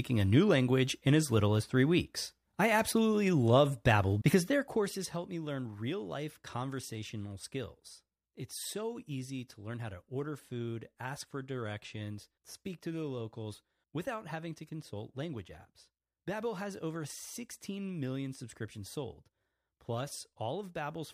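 Speech clip with zipper noise from 4.46 to 5.25 s, just before "me learn". The level drops about 10 dB in 1 dB steps, around twenty per second. Each unsmoothed step clicks audibly.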